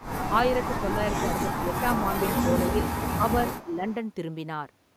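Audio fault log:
0.00–0.06 s and 3.59–3.94 s, echo leak: a faint delayed copy of the speech returns, about 25 dB below it at the start and about 20 dB below later, lagging by 287 ms and 310 ms. The likely cause is a far-end loudspeaker echo that the canceller failed to fully remove.
0.81–0.86 s, 1.27–1.68 s and 3.18–3.86 s, speech suppressed in double talk: the speech dips by about 5 dB in the first, brief event and by about 10 dB in the later two, losing roughly 200 ms and 300 ms. This is likely because the echo canceller attenuated everything while both sides talked.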